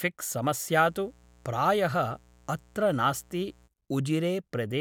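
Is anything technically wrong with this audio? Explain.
Yes. From 0.75 s to 3.70 s the speech carries a mains buzz at 60 Hz, sitting roughly 30 dB below the voice. Sharp switching spikes, likely from a dimmer, rectifier or unshielded cable, arrive twice per cycle, spreading harmonics into the kilohertz range and producing a steady, raspy buzz.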